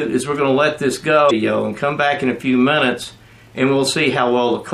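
A brief glitch breaks through from 1.27 to 1.31 s, the sign of damaged data in a compressed stream: data there was corrupted, so the decoder misread those frames and lost sync until it locked onto the next valid frame header.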